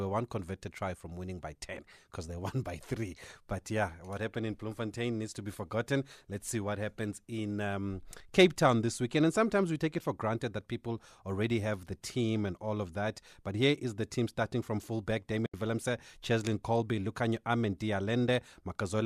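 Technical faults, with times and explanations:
15.46–15.54 s, AAC frame loss with muting: after "team starting from fullback" there's a soft 80 ms hole, where the decoder likely zeroed several lost frames.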